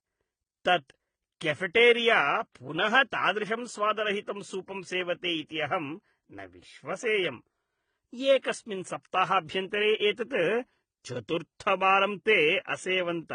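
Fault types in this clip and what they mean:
Transcoding between lossy codecs, throughout: nothing above 9.7 kHz remains, and the speech carries two overlapping sets of coding artefacts. This points to a low-rate HE-AAC pass re-encoded as AAC-LC, with the second encoder likely spending bits on the first one's damage.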